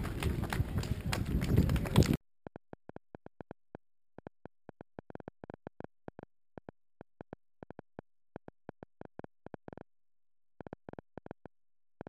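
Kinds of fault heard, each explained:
Train of clicks: From about 2.47 s to the end at 12.08 s, a ticking runs over the sound, roughly seventy sharp, similar clicks at an average of about 6.6 per second but with uneven spacing, so it stutters rather than keeping time. The peaks stand a few decibels above the audio and stay audible in quieter moments. The likely cause is a repeating pulse from nearby electrical interference or a faulty connection or power supply.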